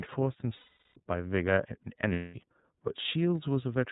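From the start, the speech carries plainly audible iLBC codec damage. It sounds narrowband and slightly rough and synthetic, and a spectrogram shows an empty band above 4 kHz. This fits iLBC's 13.33 kbps mode, where each 30 ms frame is coded independently.

Lost iLBC frames come at 0.57–0.97 s (390 ms) and 2.12–2.34 s (210 ms). Each gap becomes a held, buzzy vowel as the decoder loops the last pitch cycle with noise. The waveform shows near-identical repeating periods and the spectrogram shows frozen harmonic bands. The voice is right again almost at once afterwards.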